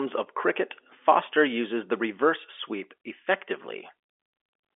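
No technical faults can be heard in this speech clip. It carries the narrow sound of a G.711 telephone line, with the speech held to roughly 300 Hz to 3.5 kHz and nothing above about 3.7 kHz.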